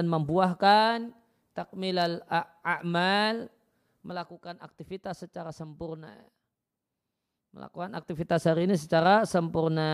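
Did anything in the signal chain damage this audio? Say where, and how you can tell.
Yes, there's zipper noise: a gain stage is changing level in unsmoothed 2 dB steps that tick audibly. From 3.99 to 4.37 s, just before "aktivitas secara sempurna", it drops about 10 dB at roughly 20 steps a second. From 7.52 to 8.64 s it climbs about 10 dB at around 7 a second.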